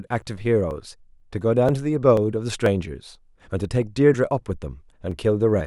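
From 0.22 to 5.61 s, periodic USB or driver dropouts skip roughly 10 ms of speech every 0.49 s. Each gap that falls during speech is heard as a regular tick.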